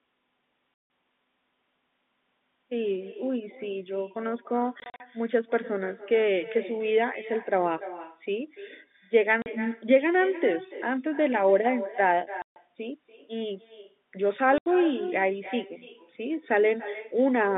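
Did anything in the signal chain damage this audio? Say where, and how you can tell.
Yes. In call processing there is echo with no canceller. The far end's loudspeaker leaks into its microphone and nothing subtracts it, so the speech returns after the network round trip. It arrives roughly 300 ms late and about 15 dB down, a thin shadow trailing the speech throughout.

In the network there is packet loss filled with silence. The gaps fall at 0.74 to 0.90 s, 4.80 to 5.00 s (scattered, longest 40 ms), 9.42 to 9.46 s, 12.42 to 12.56 s and 14.58 to 14.66 s. The gap lengths step in 20 ms units, which fits 20 ms packets, and each hole has hard edges.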